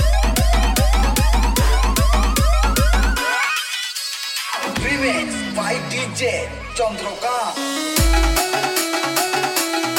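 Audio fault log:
1.00 s, Bluetooth stutter: a brief catch in the sound, a slice of roughly 21 ms heard again before the audio carries on, and it picks up a little further along than where it broke off, as though it had kept playing underneath. This points to a single lost or late wireless packet. The receiver had nothing new to play, so it replayed its last buffer to bridge the gap, then jumped ahead once fresh data arrived.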